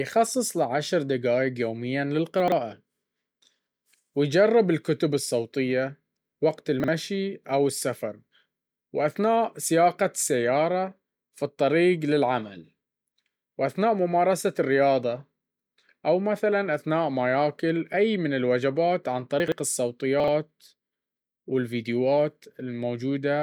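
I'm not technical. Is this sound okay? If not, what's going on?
No. The speech has chunks out of order at 2.4, 6.8, 19.4 and 20.2 s. Tiny 40 ms slices play late, after the pieces that should follow them. Each spot sounds briefly jumbled. Unlike a dropout, nothing goes missing.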